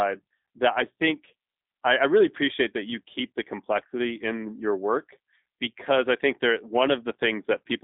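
From start to finish the speech sounds thin, boxed-in and slightly rough, with a faintly synthetic buzz. Nothing above about 3.8 kHz survives, and the low end is trimmed to a telephone line band of roughly 250 Hz to 3.7 kHz. These are the marks of the G.729 codec, here the G.729A variant. It rebuilds each short frame from a vocal tract filter, a pitch predictor and a few pulses, which fits an 8 kbit/s stream.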